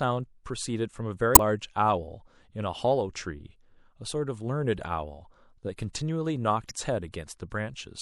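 A watery, swirling quality runs through the whole of this speech recording, with dulled treble and s sounds that chirp metallically and smear at their onsets. That is the signature of MP3 compression, likely at a low rate; the thinness fits a bitrate around 64 kbps. Starved of bits, the encoder has cut the upper frequencies and discarded quiet spectral detail that flickers in and out between frames. Two brief glitches break through as well, from 1.32 to 1.39 s and from 6.67 to 6.71 s. These are damaged data in a compressed stream: corrupted bytes in the encoded file make the decoder misread those frames and lose its place until it locks onto the next valid frame header.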